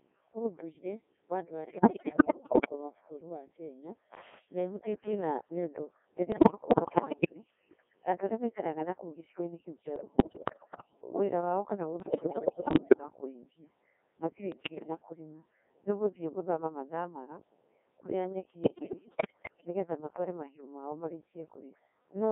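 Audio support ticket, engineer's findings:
Codec 2 vocoder, whole clip. Speech comes out robotic and buzzy, squeezed into roughly 250 Hz to 3.5 kHz, with heavy codec damage. Probable component: the Codec 2 digital voice path, and the sound fits its 1.6 kbit/s mode. The decoder only gets pitch, voicing, energy and a spectral envelope per frame, then rebuilds the voice from sine waves. The real waveform never makes it through, hence the synthetic, buzzy character.

Bit errors on digital voice radio, six bursts, most about a second long: 1.68–2.72 s (between "ũndũire wa andũ" and "rwa bũrũri wa"), 6.32–7.35 s, 9.96–11.01 s, 12.00–13.03 s (right after "wĩra wao kana"), a shorter half-second hit at 14.52–15.02 s, and 18.64–19.67 s (just before "matware mahiũ mao"). Symptom: the voice jumps in pitch and level, tone colour lurches, and it breaks into warbles, bleeps and robotic gibberish. Mechanism: corrupted frames reaching the vocoder. 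The damage points to a badly degraded link with something like 10 to 15 percent of bits flipped, which is typical of a fringe-coverage signal. At this bitrate every bit sets pitch, voicing, energy or spectrum for an entire frame, so each flipped bit scrambles a whole slice of the synthesis.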